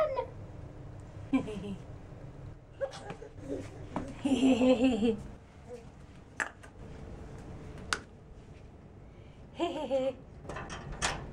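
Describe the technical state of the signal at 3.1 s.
At 3.1 s the sound is sitting about 6 dB lower than just before, a sudden sag that runs from 2.53 s to 3.38 s and then snaps back. The likely cause is one channel dropping out: with one stereo side lost, the mono sum keeps only half of the shared material.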